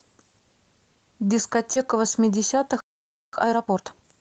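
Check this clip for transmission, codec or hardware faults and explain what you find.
Three faults are audible: a short concealed packet loss, a playback stall, and a time-compressed catch-up.

At 1.73 to 1.78 s there is short concealed packet loss. About 20 ms of speech arrived too late to decode. The receiver extended the preceding sound to fill the gap, then blended back. The result is a brief smear or wobble.

A playback stall runs from 2.80 to 3.33 s. The speech stops mid-flow and the output is silent for about 0.53 s. The player likely ran out of buffered data, or its thread was blocked until it recovered.

Time-compressed catch-up follows from 3.33 s to the end. The player trims its backlog by cutting small pieces and cross-fading the joins. The speech runs at about 1.5 times normal speed. Pitch stays normal.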